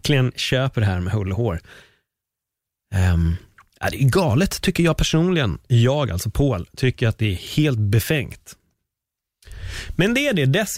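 No technical faults are audible.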